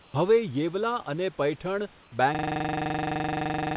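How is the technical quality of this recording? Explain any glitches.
The recording has two kinds of glitch: brief comfort-noise patches in quiet gaps, and a hard system hang loop that runs to the end. The narrow call-path bandwidth, with nothing above 4 kHz, is normal for G.711.

Comfort noise in place of the background appears from 0.02 to 0.14 s and from 2.03 to 2.12 s. The real room background is replaced by flat, featureless hiss, about 2 dB quieter. Discontinuous transmission is the likely cause. The receiver synthesised noise during the silences.

The system hang loop starts at 2.35 s and lasts until the clip ends. A 42.67 ms slice repeats 40 times, a rapid buzzing stutter at 23.4 Hz. That fits a 2048-sample ring buffer cycling while the system froze. Roughly one and a half seconds of audio is lost.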